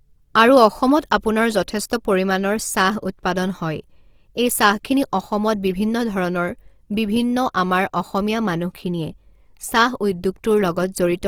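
From start to finish the speech carries Opus compression damage, likely from its CELT music mode at a rate that fits roughly 24 kbps. Band energies are kept but bits run short, so gaps are filled with folded or noise-like content, making the speech sound rough and grainy rather than swirly. A spectrogram shows full bandwidth up to about 20.4 kHz with few holes, but with smeared, noisy texture in the upper bands.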